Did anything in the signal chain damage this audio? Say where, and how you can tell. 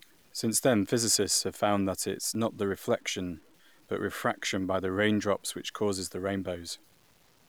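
Yes. Through the whole speech clip there's grainy distortion riding on the signal, gritty on quiet passages and sputtering as they fade, about 35 dB down. That's low bit depth without dither, likely a sample-format conversion truncating to about 9 bits, so the error tracks the signal.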